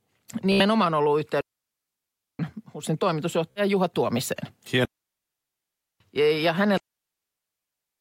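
Bluetooth stutter at 0.52 to 0.63 s: late or lost packets make the receiver replay its last short slice of buffered speech, giving a brief machine-gun buzz. About 76 ms of sound is skipped, which fits roughly five lost packets. Speech resumes further on, as if it had kept playing.

Digital wireless dropout from 1.41 to 2.39 s: the link loses too much data and the receiver mutes with a very fast fade, leaving a clean hole of near silence lasting about 0.98 s, with no noise burst before or after.

Bluetooth stutter again at 3.51 to 3.61 s, a shorter repeating buzz covering about 46 ms of lost sound, consistent with around three missing packets.

Digital wireless dropout from 4.85 to 6.00 s, a clean mute of about 1.15 s.

Digital wireless dropout from 6.77 s, a clean mute of about 1.24 s that runs until the clip ends.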